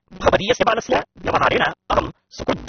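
From the start, a block size mismatch truncates the speech. Each block loses its tail, leaving a 188 Hz buzz. The speech runs 1.88 times fast at near-normal pitch, which fits a 256-sample read.

Throughout, the speech is dull and smeared, with nothing above 6.3 kHz. The likely cause is AAC compression at a low bitrate, around 27 kbps.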